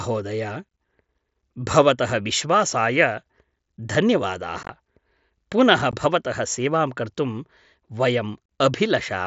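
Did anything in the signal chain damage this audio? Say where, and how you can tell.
Yes. Unconcealed Bluetooth headset packet loss occurs on the headset-to-phone radio link at 4.63–4.69 s, at 5.91 s just before "भवतः सेवां कर्तुं", and at 8.46–8.49 s. Lost speech packets became abrupt gaps.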